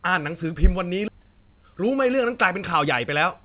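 At 1.08 to 1.10 s the speech jumps forward in a skip ahead: roughly 0.7 s of audio never plays, and the two sides are spliced together with no fill at all. Because the stretch was dropped while later audio was already queued, the delay shrinks by the same amount. On the waveform the envelope changes abruptly at the join, and the spectrogram shows one formant pattern cutting straight into an unrelated one without any silent band between.

From 1.18 to 3.05 s comes a jitter buffer speed-up. Still holding more audio than its target, the receiver trims single or few pitch periods repeatedly, removing around 150 ms in total, so the speech runs about 6 percent fast at unchanged pitch and sounds slightly hurried. On the spectrogram the harmonics stay at the same spacing while syllables are compressed in time; the waveform shows whole periodic cycles repeatedly missing at the splice points. Throughout, nothing appears above 4 kHz, which fits a G.711 call codec.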